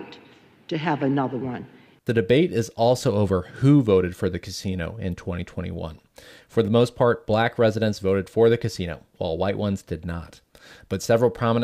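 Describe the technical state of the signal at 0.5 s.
The speech signal at 0.5 s is intact, with no audible fault at that moment.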